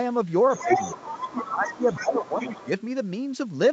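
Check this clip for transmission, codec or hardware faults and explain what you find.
Two echo-cancellation faults stand out in this speech, both arising in the call's echo handling rather than the codec. The Opus path audibly tops out around 8 kHz.

Other side's voice leaking through, 0.49 to 2.81 s: a second, fainter voice sits underneath, roughly 10 dB below the talker. The likely cause is a loudspeaker feeding the far end back into the microphone, with the echo canceller leaving a residue.

Speech suppressed in double talk, at 0.64 to 0.70 s and 1.48 to 2.68 s: the talker's level sinks by around 10 dB, briefly in the first spot and for about a second in the second. Both voices likely overlap there, so the canceller, unable to separate them, probably ducked everything.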